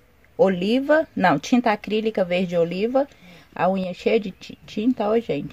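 A sudden gain jump occurs from 3.84 s to 3.99 s: the level drops by about 6 dB in a single step, with the sound and its background noise falling together, likely because a gain change was applied instantly rather than ramped.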